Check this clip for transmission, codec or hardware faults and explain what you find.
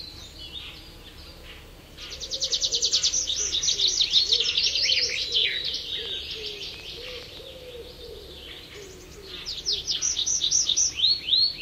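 Two kinds of fault are present: repeated corruption in the compressed stream, and a burst of clicks.

Damaged data in a compressed stream, at 0.62–0.66 s, 4.33–4.39 s, 6.93–6.99 s and 9.88–9.93 s. At each point some bytes of the encoded stream were lost or overwritten, so the decoder misread the affected frames, lost sync and had to hunt for the next valid frame header. Each one lasts about 50 ms and is heard as a short chirp or squawk.

Train of clicks, from 6.06 to 7.38 s. This is likely electrical interference from nearby equipment or a faulty connection or power supply, injecting repeated pulses into the signal. There are roughly seven clicks of similar shape, arriving at about 5 per second but unevenly spaced, with peaks about 10 dB above the surrounding sound. They come across as an irregular ticking laid over the audio, and the stream glitch at 6.93 s falls within this run.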